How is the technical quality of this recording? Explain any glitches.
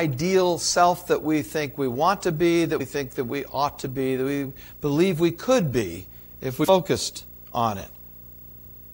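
The recording has two separate problems: a steady interference buzz through the whole clip, and two brief jumps where chunks of the speech go missing.

The video or display buzz runs throughout. A screen or video cable is coupling into the audio path. It produces a buzz at the 59.94 Hz picture field rate with a fizzy hash above it and a thin, very high line-rate whine at 15.7 kHz, all sitting roughly 20 dB below the speech. On a spectrogram this shows as unbroken horizontal lines at 59.94 Hz and its harmonics, plus a lone line near 15.7 kHz. In the waveform it adds a fuzzy floor in the pauses.

Compressed frames skipped occurs twice. From 2.79 to 2.82 s, after "want to be that" and before "think that we ought", roughly 70 ms of speech vanishes. From 6.63 to 6.69 s, just after "we could be if", about 150 ms goes. In both places whole frames of the encoded stream were never played because they were absent or rejected as corrupt, so the audio leaps forward. 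A spectrogram shows an abrupt discontinuity in the speech harmonics. The waveform shows the speech envelope jumping without a gap.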